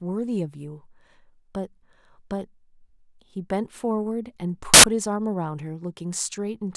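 At 4.74 s a hard-edged burst of very loud white noise cuts in and stops abruptly at 4.84 s, about a tenth of a second of static. It is file tags played as audio: an embedded cover picture's compressed data was decoded as samples.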